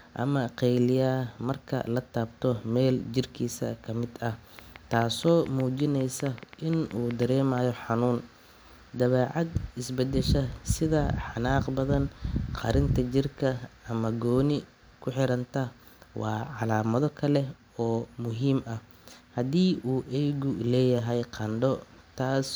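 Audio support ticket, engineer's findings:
Train of clicks, 4.59 to 7.59 s: around twenty near-identical pops at an uneven pace, averaging 6.36 a second, sticking out well above the speech, pauses included. Likely nearby equipment interference or a faulty connection or power supply injecting pulses.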